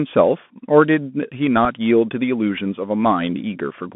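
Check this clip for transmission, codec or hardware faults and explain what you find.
Two faults turn up here, one running the whole way through and one brief glitch.

The Bluetooth CVSD headset codec shapes everything. The band runs only from about 150 Hz to 3.5 kHz. The one-bit encoder, which fits a 64 kbps link, tracks the waveform with an adapting step size that can't keep up with fast, loud high content. So s sounds go scratchy, and you get plainly audible granular hiss under the speech.

At 1.65 s there's a Bluetooth headset packet repeated. About 3.8 ms of audio went missing, which fits a single lost packet. The chip decoded the previous packet's bits a second time to fill the gap, and you hear it as a small tick rather than a sustained buzz.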